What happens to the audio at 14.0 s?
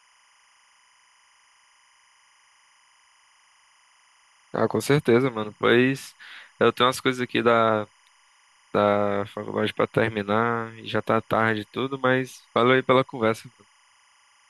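At 14.0 s the speech carries timecode bleed, and it is not confined to that moment; the same interference runs through the entire clip. Linear timecode at 25 frames per second is leaking in from an adjacent track or cable. Its square-wave code flips between tones near 1 kHz and 2 kHz, producing a steady, chirping warble sitting roughly 40 dB below the speech, quiet but constant behind it.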